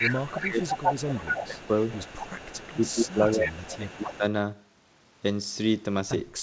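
From 0.0 to 4.18 s a delayed copy of the speech trails the main voice by 239 ms, about 10 dB down. This is an echo leak: a far-end echo canceller likely let loudspeaker sound picked up by its microphone pass back.

Overlapping that stretch, the speech is suppressed in double talk at 0.12–0.77 s, 1.09–1.65 s, 2.57–3.54 s and 3.78–4.24 s, dipping by around 15 dB in patches. The likely cause is the canceller failing to separate talker from echo and attenuating both. Throughout, the audio stops near 8 kHz, as a wideband call codec would leave it.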